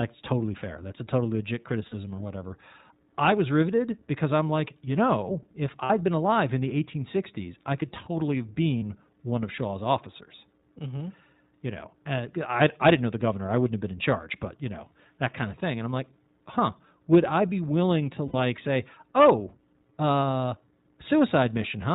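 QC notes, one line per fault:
throughout: iLBC codec. The speech sounds band-limited and slightly rough and synthetic, with the codec damage plainly audible. Nothing above 4 kHz gets through, so the top of the voice is dull, and each 20 ms frame's excitation is coded on its own at 15.2 kbps.
1.88 to 1.94 s, 5.84 to 5.90 s, 8.78 to 8.83 s, 18.28 to 18.36 s: lost iLBC frames. Each gap is heard as a brief held, buzzy vowel. They fall after "a totally legit", after "like you know if", mid-stream near 8.8 s, and after "I be willing to", lasting 40, 60, 40 and 60 ms. The decoder fills each loss by repeating the last pitch cycle blended with noise. Because iLBC frames stand independently, the voice snaps back cleanly right after.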